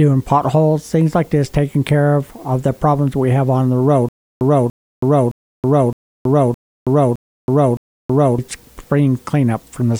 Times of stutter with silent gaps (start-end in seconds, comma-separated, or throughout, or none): 4.09-8.38